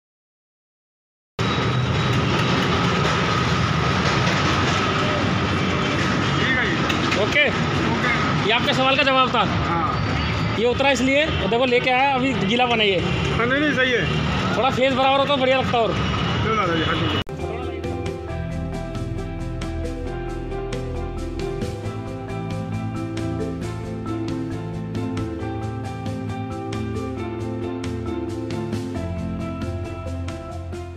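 From 0.00 to 1.39 s the file holds only digital silence, and at 1.39 s the audio begins abruptly in the middle of a sound. This is a cut-off start: capture or streaming began after the sound was already under way, so its opening portion was never recorded. There is no natural attack or fade-in. The signal jumps from silence straight into the sound, which makes the entry sound truncated rather than like the true start of an event.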